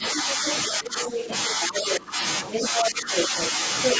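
Speech suppressed in double talk runs from 0.0 to 2.22 s. The talker's level dips in patches totalling around a second, at worst by roughly 15 dB. The likely cause is an echo canceller that cannot tell near speech from loudspeaker echo, so it turns both down. Within that stretch, the other side's voice leaking through is heard at 0.46 to 0.57 s, a little quieter than the speech, then at 1.07 to 1.27 s and 1.62 to 2.0 s at about the same level. These are likely remnants the canceller failed to remove from the microphone. From 2.52 to 3.48 s the leak is louder than the talker. Over it, from 2.63 to 3.54 s, suppression returns, dipping the speech by roughly 10 dB for about half a second. A final scrap of the leaking voice, again louder than the speech, comes at 3.83 to 3.97 s.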